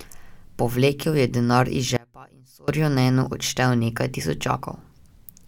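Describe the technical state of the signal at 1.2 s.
At 1.2 s the speech signal is intact, with no dropout, clipping, distortion, glitch or other fault to be heard.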